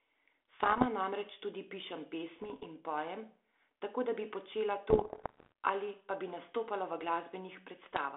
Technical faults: bit errors on an ADPCM link

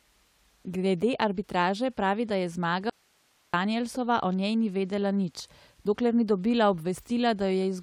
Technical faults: audio dropout to a faint residue

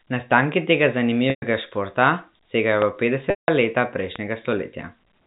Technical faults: packet loss with pitch repetition; loud pop

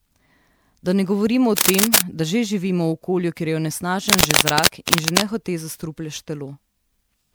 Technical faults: generation loss; cable scratch noise

